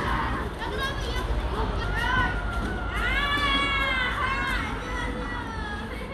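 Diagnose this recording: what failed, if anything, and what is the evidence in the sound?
The codec stage failed, with compressed frames skipped at 1.83 s. The sound jumps forward by about a fifth of a second, roughly seven frames of 26.1 ms, a frame length that fits MP3-style 1152-sample frames. Because adjacent frames overlap, the join is a short smeared blip rather than a sharp click. On a spectrogram, the texture changes abruptly at that point with a vertical smudge. The waveform envelope steps discontinuously there without a single-sample spike.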